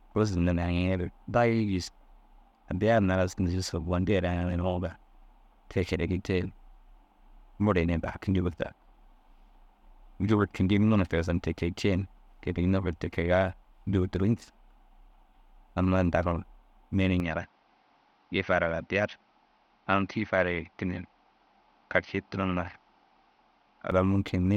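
From 17.2 s to 23.9 s the speech abruptly turns duller and a few decibels quieter, with nothing above 6.2 kHz and a new, faint noise floor, and no gap at the change. This is likely an input switched to a poorer device, whose narrower band and different tone replace the original pickup.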